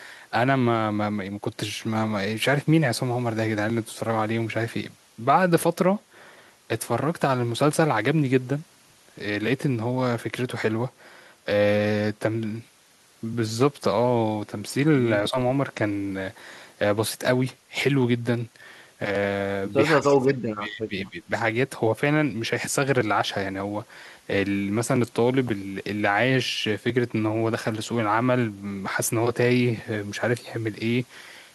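Speech that briefly dips at 15.31 to 15.36 s, losing around 10 dB, then falls away much more deeply from 19.99 to 21.3 s, where roughly a second of it sinks by around 30 dB. This is speech suppressed in double talk, likely caused by both ends talking at once: the echo canceller could not tell this talker from the returning loudspeaker echo, so it attenuated everything together.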